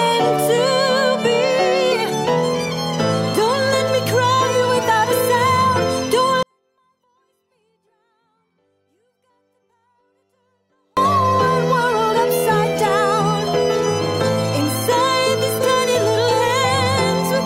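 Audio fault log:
6.43 to 10.97 s, 24-bit alignment error (too quiet): the sound stays clean but falls abruptly to near silence, about 48 dB down, and holds there for roughly 4.5 seconds before snapping back to full level. Samples packed as 24-bit integers in the low bytes of each 32-bit word were read as full 32-bit integers, so every value sits 8 bits, a factor of 256, below where it belongs, shrinking the level without adding distortion.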